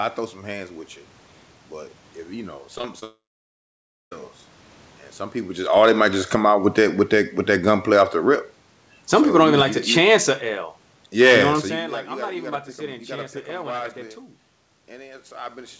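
At 2.78 to 2.85 s and again at 2.99 to 3.04 s there is short concealed packet loss. Tiny gaps of a few hundredths of a second were patched by extending the last sound. Each is a brief smear.

From 3.04 to 4.13 s a long network dropout is the likely cause. The filler buzz fades fast. About 0.95 s of near-silence follows before the speech resumes, with that stretch lost.

Automatic gain falling runs from 5.62 to 10.27 s. The gain control judged the input too loud and eased it down by about 9 dB. Speech and background sink together.

Inside that, automatic gain rising lifts the level by about 4 dB between 5.91 and 7.50 s. Speech and background swell together before the overall fall takes over again.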